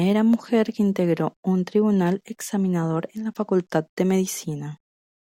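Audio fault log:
No technical faults can be heard anywhere in this speech recording; the signal stays continuous and steady in level and timing throughout.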